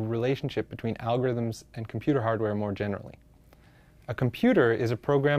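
No technical faults are audible.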